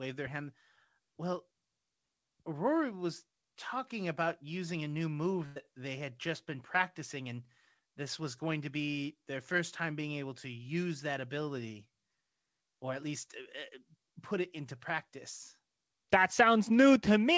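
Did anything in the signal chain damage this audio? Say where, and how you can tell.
Yes, a burst of packet loss at the network stage, 5.46 to 5.58 s, between "about using a new" and "they had just been". The receiver stretched the last sound, fading it out, for about 98 ms, then skipped 100 ms. A spectrogram shows a frozen, decaying stretch below the G.722 path's 8 kHz ceiling, then an abrupt jump.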